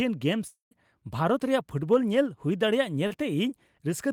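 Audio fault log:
0.47–0.74 s, long network dropout: the speech turns into a fading buzz that decays into roughly 140 ms of silence, then resumes further on. About 240 ms of audio likely never arrived, so the receiver stretched the last sound before giving up and skipping the lost part.
3.07–3.13 s, short concealed packet loss: a brief smear or wobble interrupts the speech. About 40 ms failed to reach the decoder in time, so the receiver invented roughly 34 ms by continuing the preceding sound, then blended back into the real signal.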